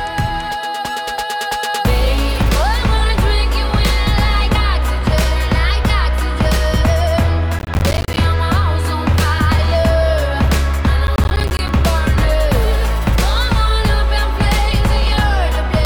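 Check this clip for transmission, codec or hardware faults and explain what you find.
Processor overload crackle appears twice, from 7.59 to 8.24 s and from 11.07 to 11.69 s. The processor repeatedly misses its deadlines for short buffers, around 10 ms each, leaving dozens of hard-edged silent gaps that together sound like a gritty, tearing crackle over the audio.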